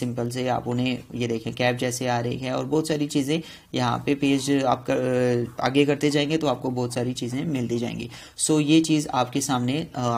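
Nothing stood out on listening that would call for comment.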